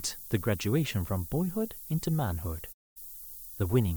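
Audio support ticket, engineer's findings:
Steady, thin hiss under the speech throughout, sharply brighter toward the top of the band, only about 15 dB below the voice. Probable component: requantiser on the output path. Low bit depth with noise shaping: a coarse word length, consistent with roughly 7 bits. The rounding error is fed back and pushed upward in frequency, so the hiss is concentrated high rather than spread flat.

Speech fades out over about 20 ms at 2.72 s, then silence until 2.98 s. Roughly a quarter second of programme is gone. Probable component: broadcast receiver or decoder. Digital broadcast dropout: frames were lost or failed their checksum, so the decoder muted until valid frames resumed. The gap is consistent with about seven lost frames, and their audio is not recovered.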